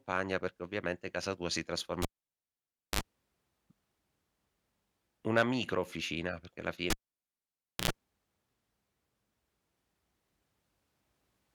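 Right after "ovviamente casa tua si", at 2.02 s, the cable is pulled and plugged in: a pop, about 0.94 s of near silence, a 54 ms burst of 50 Hz buzz as the tip scrapes in, then another pop at 3.01 s. After "micro officina perché alla" it happens again from 6.90 to 7.91 s, with about 0.95 s dead and 90 ms of 60 Hz buzz.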